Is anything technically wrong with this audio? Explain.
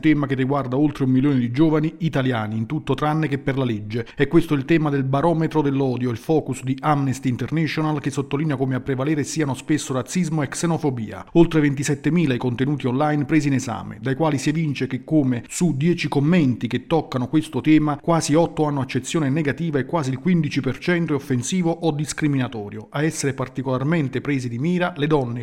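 No, nothing technically wrong turns up here; the audio just runs along without any trouble worth pointing to.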